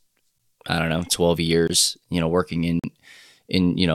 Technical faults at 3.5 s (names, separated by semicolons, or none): none